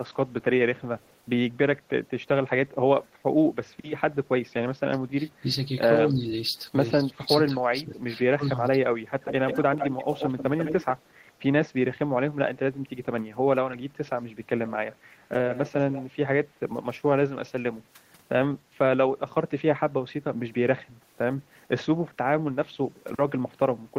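A far-end echo canceller likely let part of its loudspeaker pickup through at 0.8–1.16 s, producing an echo leak: a very faint copy of the speech returns about 163 ms late. Its own echo canceller then likely mistook double talk for echo, so speech is suppressed in double talk. It dips by roughly 15 dB at 5.4–5.47 s, slightly at 6.08–6.26 s, and deeply, around 25 dB, in pieces across 7.01–8.91 s. The echo leak likely returns at 9.21–10.93 s as a strong echo, only about 10 dB down and 142 ms behind. At 14.67–14.96 s it is fainter, and at 15.5–16.04 s strong again, both times trailing by 138 ms.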